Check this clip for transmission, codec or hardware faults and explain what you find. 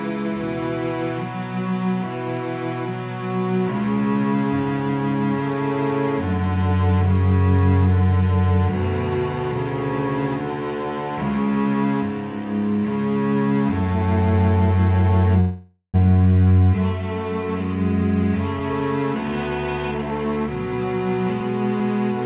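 One transmission fault stands out, heard through audio whose band stops at about 4 kHz, which fits a G.711 mu-law call path at 64 kbps. From 15.40 to 15.96 s there is a call audio freeze: the last sound is stretched into a fading buzz for about half a second, ending in roughly 70 ms of silence, then the audio resumes exactly where it stopped. This is likely a jitter buffer running dry while packets were delayed. Unlike packet loss, nothing is skipped; the rest of the clip just arrives about 0.54 s later.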